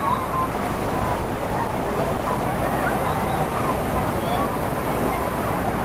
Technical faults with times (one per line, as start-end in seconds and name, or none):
0.52-2.51 call bitrate drop